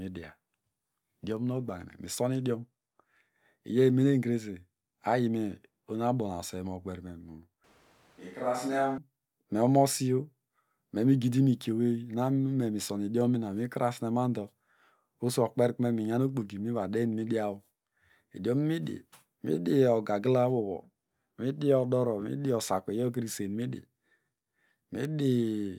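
Switch to a distant microphone, 7.64 to 8.98 s: speech abruptly turns hollow, roomy and thin, about 5 dB quieter, likely because the close microphone dropped out.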